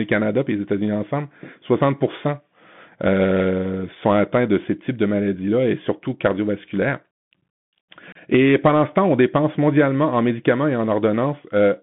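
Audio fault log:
throughout: Bluetooth CVSD headset codec. Sound is confined to about 150 Hz to 3.5 kHz. Scratchy sibilants and granular hiss fit a 64 kbps one-bit delta link.
8.12–8.18 s: unconcealed Bluetooth headset packet loss. A 30 ms hole with abrupt edges. Several lost voice packets were replaced by silence or an idle pattern, not smoothed over.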